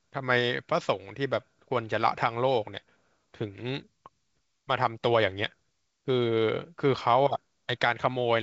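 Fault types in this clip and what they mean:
No faults heard in this clip.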